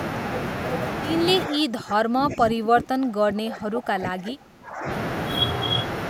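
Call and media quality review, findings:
Speech suppressed in double talk, 1.48–4.87 s. Level dips, deepest around 25 dB. Likely echo canceller attenuating near-end speech along with far-end echo.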